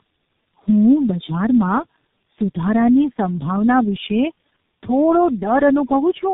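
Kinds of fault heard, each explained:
Tandem speech coding: rough, muffled, warbly speech cut off above 3.8 kHz, which fits three successive low-rate speech codecs each re-coding the last one's output.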